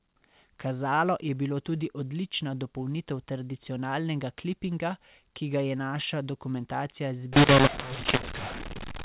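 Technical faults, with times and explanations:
7.33–9.05 s, mu-law and A-law mixed up: right after "ga je naša dokumentacija", the A-law telephone samples are decoded with the mu-law curve. Each 8-bit code maps to the wrong level, some too loud and some too quiet, so the speech turns harsh and distorted. Near-silent samples are lifted, filling the pauses with noise.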